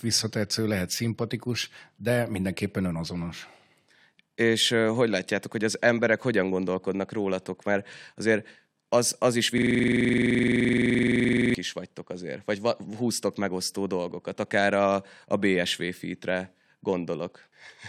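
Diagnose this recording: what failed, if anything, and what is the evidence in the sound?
The driver or buffer stage gave out here: a system hang loop from 9.58 to 11.54 s, right after "azért az az is", with normal audio returning at "is vagytok azért vagy". For about two seconds, one 42.67 ms slice of speech repeats exactly, roughly 46 times, giving a rough 23.4 Hz buzzy rattle. The machine froze while the audio hardware kept replaying the same ring buffer, which fits a 2048-sample buffer.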